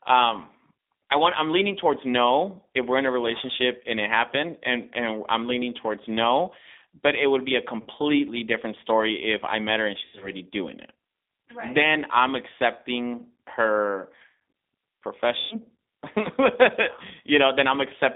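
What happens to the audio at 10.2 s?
Around 10.2 s the speech smears into a stretched buzzy tone or coloured noise that sags in level, then sounds thin and rough for a moment as normal sound returns. This is VoIP packet loss concealed by the speech codec, from 10.05 to 10.31 s, between "I met her and" and "doing it". About 120 ms of audio went missing in gaps spread over 160 ms, the longest run 80 ms. The decoder filled these gaps by repeating its last pitch and vocal-tract shape at falling gain. Because each frame depends on the previous one, the damage lingers briefly after the gaps.

The whole clip also passes through the G.729 codec (the G.729A variant) at 8 kbit/s. It rebuilds speech from a vocal-tract filter, a pitch predictor and a few pulses per frame, which gives the audio a plainly rough, synthetic edge. The sound is also confined to a telephone band of about 250 Hz to 3.7 kHz, so at this moment it is thin and dull. 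The stretched concealment sound sits on top of that coarse, narrow-band sound.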